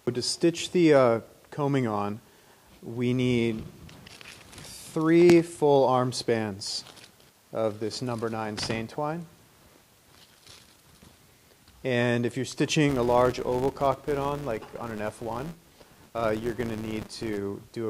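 From 12.89 to 17.38 s, the filter restarted on every block, dropping its state each time; the resulting transients form a 200 Hz buzz tracking the sound's level.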